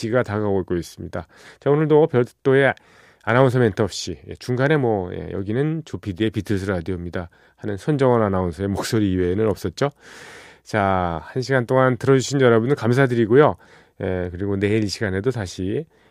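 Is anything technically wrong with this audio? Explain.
No, nothing is technically wrong.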